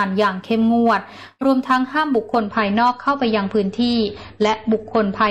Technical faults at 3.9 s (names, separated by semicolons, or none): adaptive stream at a lower bitrate